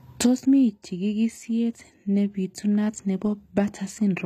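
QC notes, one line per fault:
Throughout: low-bitrate audio saved at a high bitrate. The speech has nothing above 14.9 kHz and carries artefacts from a much lower-rate encode, likely a very low-bitrate HE-AAC pass re-encoded to a high-rate MP3 that can't restore what the first codec removed.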